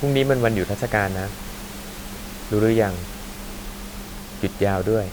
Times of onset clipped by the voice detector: none

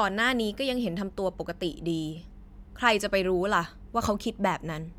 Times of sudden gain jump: none

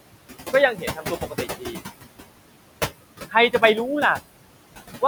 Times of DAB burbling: none

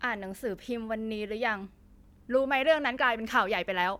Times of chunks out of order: none

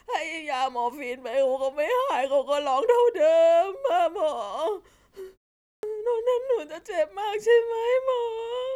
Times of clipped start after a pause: 5.73-5.83

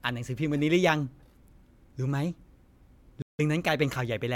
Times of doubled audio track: none

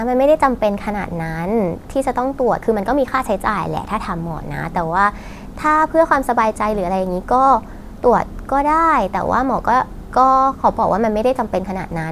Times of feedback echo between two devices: none

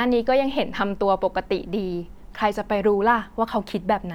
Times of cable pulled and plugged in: none

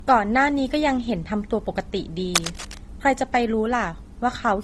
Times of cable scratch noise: 2.34-2.85

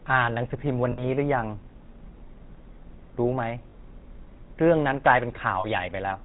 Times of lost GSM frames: 0.92-1.05, 3.70-3.75, 5.60-5.65

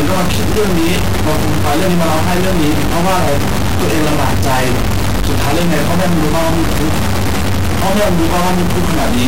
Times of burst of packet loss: none

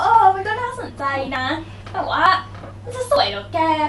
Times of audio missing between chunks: 0.45, 0.90, 1.36, 2.26, 2.71, 3.16

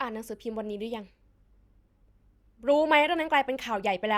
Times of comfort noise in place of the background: none

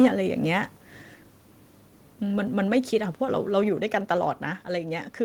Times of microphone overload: 0.00-0.07

